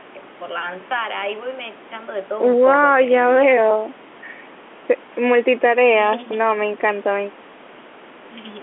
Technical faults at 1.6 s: none

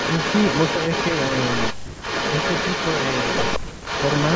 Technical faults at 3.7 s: echo leak; speech suppressed in double talk

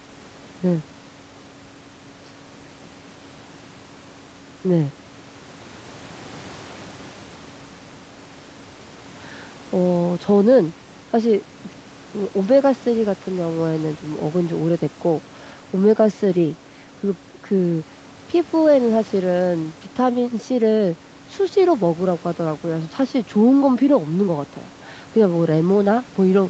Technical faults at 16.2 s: none

